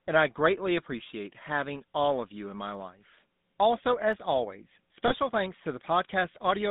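Throughout, the speech has the buzzy, gravelly roughness of the GSM full-rate codec, consistent with 13 kbps coding, and the spectrogram shows energy confined between 150 Hz and 3.7 kHz. At 2.75 s and again at 4.13 s, sharp single clicks appear as thin vertical lines on the spectrogram and waveform jumps, likely from dropped samples, only a handful each. From 5.08 to 5.13 s, a brief metallic ring of lost GSM frames holds the sound for about 20 ms, visible as smeared, repeated spectral texture.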